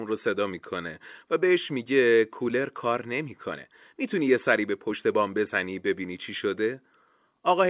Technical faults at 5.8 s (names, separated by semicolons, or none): none